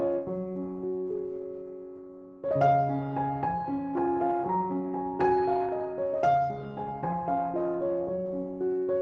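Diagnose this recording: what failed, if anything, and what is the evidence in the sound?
Nothing failed in this recording, and the sound shows no evidence of a fault along its call path.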